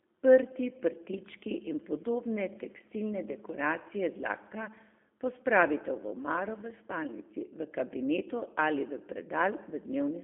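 From start to finish the speech carries G.729 codec damage, plainly audible: the line band runs roughly 250 Hz to 3.5 kHz with nothing above 3.7 kHz, and the rebuilt voice sounds rough and slightly synthetic, as expected from the 8 kbit/s G.729A.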